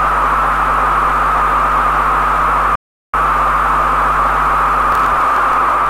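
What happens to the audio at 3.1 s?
A rebuffering stall runs from 2.75 s to 3.14 s, so at 3.1 s the sound is silent and about to resume. The player exhausted its downloaded audio and paused, then picks up exactly where it stopped, losing nothing but adding 0.38 s.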